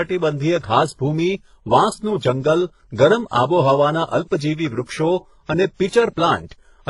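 Throughout the speech, the audio has likely been through transcoding between lossy codecs, first a very low-rate codec of the HE-AAC kind and then a WMA-style encoder at a more generous rate. The second stage spends its bits reproducing the first stage's damage and adds its own. Nothing sounds above about 11.1 kHz, and the voice carries the artefacts of both codecs, both layers audible at once.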